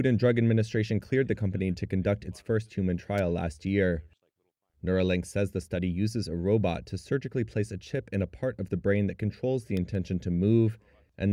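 Two sharp snaps sit on top of the sound at 3.18 s and 9.77 s, lasting about 13 ms and 2 ms and peaking around -25 dBFS. These are electrical switching spikes, likely from a nearby switch, relay or static discharge arcing into the audio line. They differ from dropout clicks: the underlying sound carries on uninterrupted beneath each snap instead of being cut or replaced, and the two events are isolated rather than repeating at a regular buffer rate.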